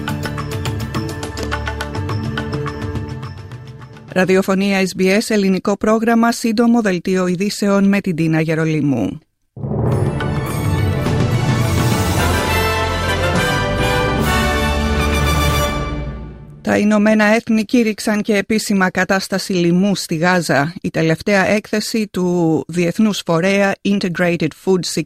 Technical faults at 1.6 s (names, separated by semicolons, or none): none